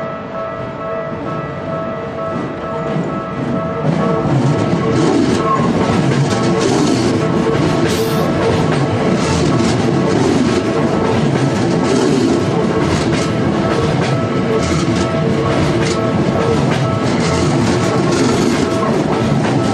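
No technical fault can be heard anywhere in the audio. There is nothing here to time or trace to a cause.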